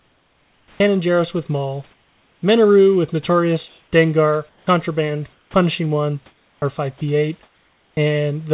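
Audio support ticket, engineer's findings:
Comfort noise in place of the background at 0.0–0.8 s, 1.91–2.42 s, 4.49–4.67 s and 5.33–5.54 s. Likely discontinuous transmission filling pauses with synthetic noise. Spectrogram shows smooth, featureless noise floor replacing textured room noise. Level steps about 6, 3 and 8 dB down, last about 1 dB up.

Onset clipped by the voice detector at 0.69–0.8 s (110 ms), 4.64–4.67 s and 5.52–5.54 s. Likely slow voice activity detection at the sender dropping speech starts. Waveform jumps from flat noise straight into speech, no soft rise.

Sound chopped by the voice detector, 6.26–7.97 s, roughly 930 ms replaced. Likely voice detector toggling on and off. Spectrogram shows speech energy cut into blocks.

Call path band-limited, nothing above 4 kHz, consistent with a G.711 A-law codec.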